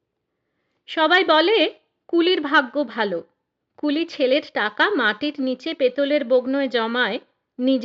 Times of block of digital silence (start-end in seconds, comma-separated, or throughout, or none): none